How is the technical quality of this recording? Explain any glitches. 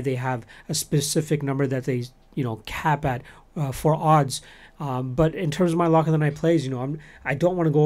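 No technical glitches can be heard in this speech recording. Nothing in the audio breaks, jumps or drops out at any point.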